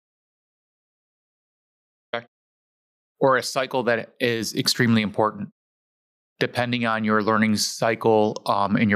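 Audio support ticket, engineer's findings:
Audio dropout to silence, 0.00 to 2.13 s. Already under way when the clip starts. Silence for the whole span, with no room tone or noise floor. Speech enters abruptly at 2.13 s, mid-flow rather than from a pause. Probable component: input path or capture device, likely a disconnected source, failed link or stray mute. Recorder kept writing silence meanwhile. Content before 2.13 s is lost.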